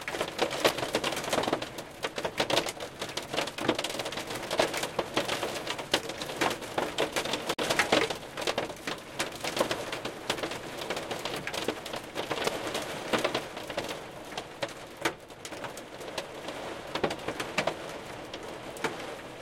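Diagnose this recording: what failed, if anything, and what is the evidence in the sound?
The fault lies in the compressed stream: damaged data in a compressed stream, with corrupted bytes reaching the decoder. At 0.67 to 0.72 s, 7.54 to 7.60 s and 12.44 to 12.49 s the recording of everyday sounds breaks for about 50 ms each time. The decoder cannot parse the bad frames, loses sync and scans forward for the next valid frame header, so each spot is a brief disruption in the sound rather than gradual degradation.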